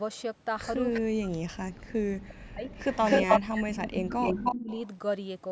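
At 0.92 to 1.01 s a short, faint copy of the speech arrives about 348 ms late, well below the main voice. This is an echo leak: the far end was likely on a loudspeaker, and its echo canceller let part of the returned signal back into the line. It returns from 2.7 to 3.4 s with a shorter 251 ms delay, this time somewhat louder than the direct speech. It comes back faintly at 3.71 to 3.85 s and at roughly equal level from 4.1 to 4.88 s. What marks it is an added, delayed repeat layered over the talker, not a loss of sound.

Between 1.01 and 2.71 s the talker's own voice drops sharply, by as much as about 40 dB, for around a second and a half in total. It is gated away in pieces while the other side is also talking. This is speech suppressed in double talk: the canceller likely could not separate the near talker from the loudspeaker echo, so it turned both down. The same thing recurs from 3.23 to 4.7 s, with dips of up to about 35 dB over roughly a second. 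Unlike the echo, this fault subtracts sound, leaving holes and thinned syllables rather than a doubled voice.

Throughout, the call's microphone processing trims the lowest bass, and nothing is present above 8 kHz.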